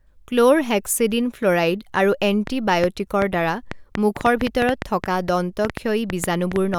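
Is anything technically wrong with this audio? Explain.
Yes. From 2.47 s to 6.75 s a train of clicks runs over the speech, about 5.2 per second at an uneven spacing, roughly twenty in all. The likely cause is interference from nearby equipment or a faulty connection or power supply injecting similar short pulses. They sound like sharp, irregular ticking, poking through the pauses as well, with peaks well above the speech. A waveform shows thin vertical spikes, and a spectrogram shows narrow broadband streaks.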